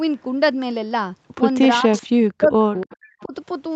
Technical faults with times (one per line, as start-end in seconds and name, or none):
1.84-2.91 speech suppressed in double talk
1.94-2.02 echo leak
2.77-3.25 echo leak
3.25-3.34 speech suppressed in double talk